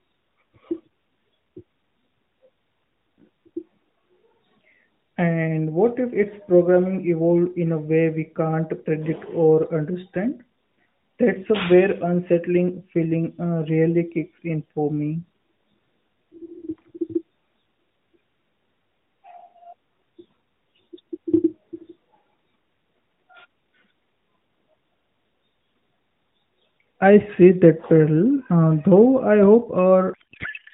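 From 30.14 s to the end, the speech turns to garbled noise and warble, a codec payload misread: octet-aligned AMR frames decoded as bandwidth-efficient, scrambling every field.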